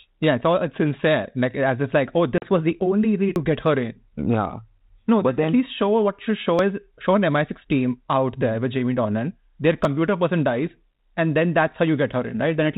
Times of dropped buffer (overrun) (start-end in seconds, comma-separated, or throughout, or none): 3.36, 6.59, 9.85